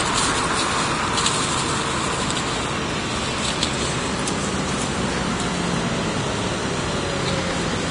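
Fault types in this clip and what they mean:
Vorbis compression: grainy hiss replaces fine treble detail, with nothing above 10.6 kHz (a flat spectrogram ceiling), which is likely heavy Vorbis coding at around 32 kbps.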